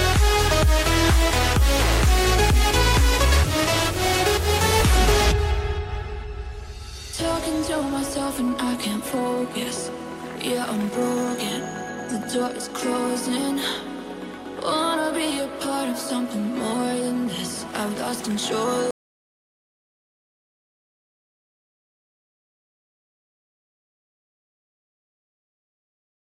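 At 18.91 s the sound cuts out abruptly and does not return. From there to the end the track is an audio dropout to silence: plain silence, with no room tone or hiss. The likely cause is lost input, such as a disconnected device or failed link, while recording continued.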